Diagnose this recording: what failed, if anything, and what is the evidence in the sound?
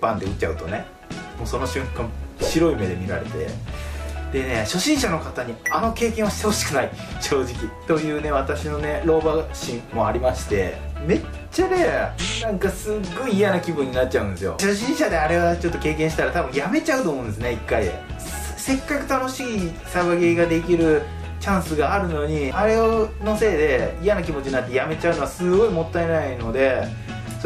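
Driver or buffer stage: a repeated buffer at 2.32 s, where a 1.33 ms chunk plays twice, fitting a 64-sample buffer, so it's just a click with nothing lost.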